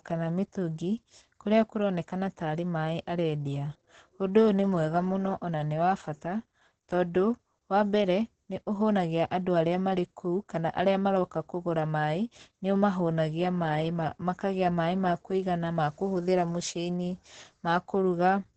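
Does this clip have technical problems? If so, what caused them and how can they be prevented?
Yes. Opus voice compression runs through the whole speech clip, and it's pretty heavy. There's nothing above about 8.9 kHz, so the top end is gone and everything sounds muffled. The codec is in its SILK linear-prediction mode at wideband, modelling the voice and coding the excitation coarsely, which is what gives it that hoarse, slightly robotic edge. The amount of damage points to a very low bitrate, somewhere around 10 kbps. To prevent it, give the encoder more bitrate, 24 kbps or higher for speech, so it keeps the full band and codes the detail properly.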